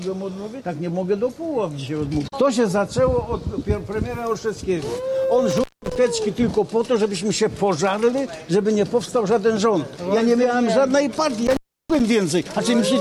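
An intermittent contact in a loose cable or plug opens the line twice, from 5.50 to 5.96 s and from 11.47 to 12.00 s. The sound drops out for 188 ms and then 328 ms, crackling at each break and leaving faint hiss.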